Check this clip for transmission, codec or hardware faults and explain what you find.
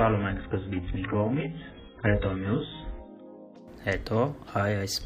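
There's one fault here: an adaptive stream starting at a low bitrate. From the start to about 3.56 s, nothing sits above 3.9 kHz and the artefacts are stronger, which fits a very low-rate AAC start (around 8 kbit/s). Then the player steps up, likely to roughly 96 kbit/s, and the treble snaps back with no gap.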